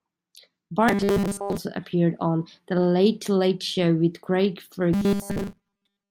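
From 0.89 to 1.58 s, ending before "appeared on", and again from 4.93 s to the end, the speech turns into a rigid metallic 200 Hz buzz: robotic sound, likely from repeating a 5 ms buffer over most of the audio.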